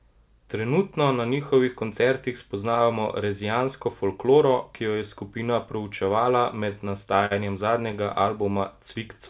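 Speech over a call line, band-limited with nothing above 4 kHz, which fits a G.711 mu-law path. From 6.61 to 7.34 s there's a stutter of repeated stalls: six brief dropouts, longest 49 ms, where the jitter buffer ran dry and the receiver stretched the last sound (about 98 ms in all), so it drags without losing anything. Then from 8.43 to 9.21 s comes a jitter buffer slow-down: the receiver repeats pitch periods to rebuild its reserve, adding 76 ms, so that stretch runs at 91% speed with the pitch unchanged.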